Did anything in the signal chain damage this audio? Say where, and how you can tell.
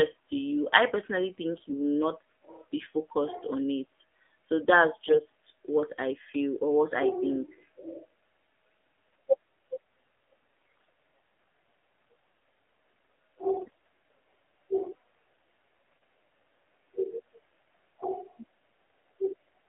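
Yes. At the codec stage, the whole 20 s passes through the AMR narrowband mobile codec. It sounds buzzy and synthetic, which fits a low rate around 7.4 kbps. A spectrogram shows nothing below 250 Hz or above 3.5 kHz, and the vocal-tract model smears the harmonics.

In the network stage, AMR bit errors appear at 1.52–1.75 s after "to you I personally", at 5.02–5.23 s before "what I feel or", and at 10.77–10.81 s, 13.52–13.89 s and 16.02 s. Flipped, unprotected bits misplace the pulses, so pitch and level hold but the sound turns gargly. On a spectrogram, the harmonics break into scattered noise.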